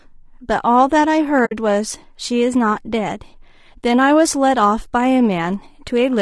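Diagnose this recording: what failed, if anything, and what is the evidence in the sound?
Low-delay AAC compression runs throughout the speech at the codec stage. The grainy, rough texture and noise between harmonics likely come from AAC-ELD's short frames at roughly 32 kbps.

AAC frame loss with muting, from 1.45 to 1.53 s, is a network-stage fault. A soft-edged hole appears where the decoder zeroed what sounds like three lost frames, faded through overlapping windows.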